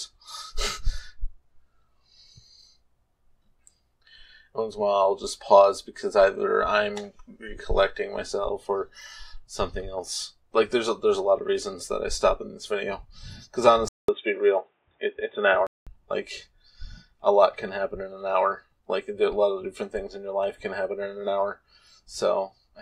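At 13.88 s a 200 ms gap precedes dull, boxy sound, likely an input switched to a poorer device, with the spectrogram blank above 3.7 kHz until 15.87 s.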